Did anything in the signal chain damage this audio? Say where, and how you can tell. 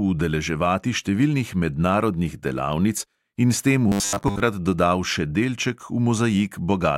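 Yes. From 3.89 to 4.41 s the speech turns into a rigid, metallic buzz at 100 Hz, the robotic sound from repeated short buffers. The likely cause is a driver or buffer stage starved of input, replaying a 10 ms block for most of that span while the real audio is skipped.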